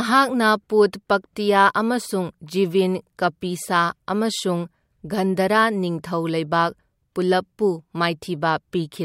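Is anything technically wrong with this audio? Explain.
No, nothing technically wrong turns up in this speech recording; it all holds together without any problems worth flagging.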